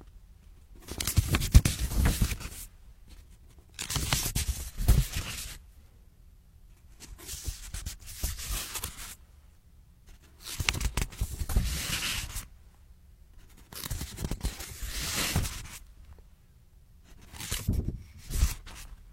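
At 10.64 to 10.68 s a brief glitch cuts through the sound: damaged data in a compressed stream, where corrupt bytes made the decoder misread frames and lose sync for about 40 ms. A spectrogram shows a sharp broadband vertical smear; the waveform shows an abrupt discontinuity.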